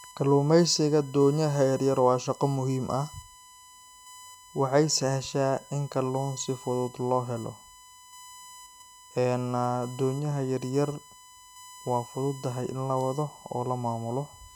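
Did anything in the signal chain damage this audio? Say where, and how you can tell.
Yes: a fixed 1 kHz whine, roughly 25 dB below the speech, runs throughout. This is USB whine, with 1 ms bus frames leaking into the analogue power or ground wiring.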